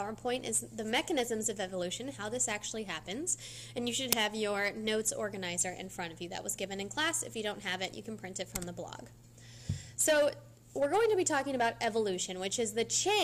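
At 4.12 s an uninitialised buffer plays unwritten memory: a loud 5.8 ms digital burst fitting a 256-sample block, a waveform spike and broadband spectrogram stripe.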